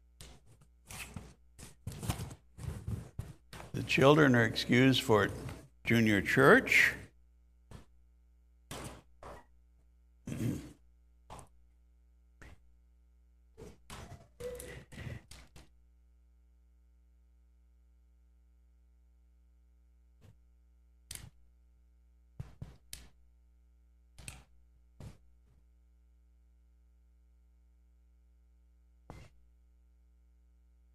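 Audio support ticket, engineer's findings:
No faults found on listening; nothing to attribute to any component. No action required on this ticket.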